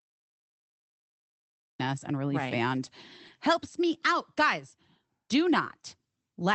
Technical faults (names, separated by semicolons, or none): cut-off start; lost packet rebuilt from error correction